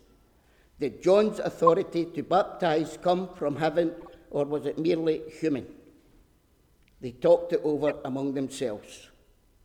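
At 1.67, 2.86, 4.01 to 4.10 and 7.88 to 7.92 s, corrupt frames are decoded. Flipped bits put energy at wrong frequencies. Each event is a brief chirp or noise burst. The last is loudest, near -15 dBFS. The third spans several frames.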